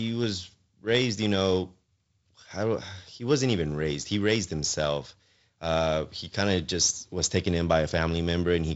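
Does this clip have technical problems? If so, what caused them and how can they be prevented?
No, this clip has no technical problems.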